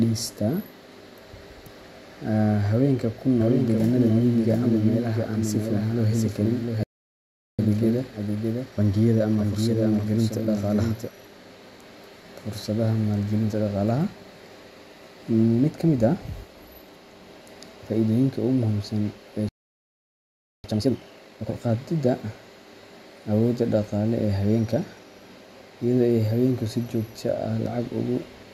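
From 3.41 s to 11.09 s the speech is heard twice: a doubled audio track, with a second full-band copy trailing by roughly 0.7 s at about 5 dB lower. It is likely captured again through a slower path. The echo has no decay or room colour and starts and stops abruptly.

At 6.83 s a playback stall cuts the speech off mid-flow for 0.75 s, likely because the player ran out of buffered data. A second stall follows "muhiimsan ee" at 19.49 s, lasting 1.15 s before output resumes at 20.64 s.

Each stall is followed by time-compressed catch-up. The player trims and cross-fades small segments to clear its backlog, so speech runs hurried at normal pitch. This happens at 1.15 times speed from 7.59 s to 10.59 s and at 2 times speed from 20.64 s to 21.78 s.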